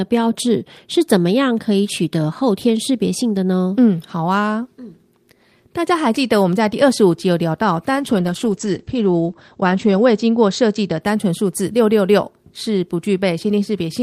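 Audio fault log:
7.96–11.07 s, call bitrate drop: speech turns muffled and watery, top cut to 8 kHz for about 2 s, fitting an encoder squeezed from 32 to 12 kbps.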